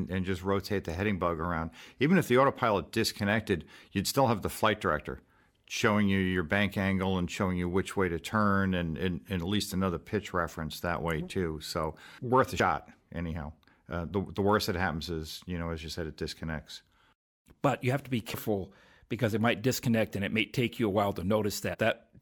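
The audio has compressed frames skipped at 4.1, 12.59, 18.33 and 21.73 s. Missing or rejected frames make it jump ahead by a blink to about a tenth of a second.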